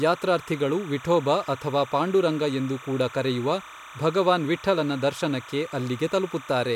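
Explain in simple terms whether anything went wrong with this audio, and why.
Something did go wrong: there's timecode bleed running under the speech for the whole clip. A timecode signal, the buzzy code that keeps recorders and cameras in sync, leaked across from a nearby track or cable. It flips between two pitches, around 1 and 2 kHz, and repeats at 30 frames a second, so you hear a steady chirpy warble behind the voice. It sits well below the speech but never lets up.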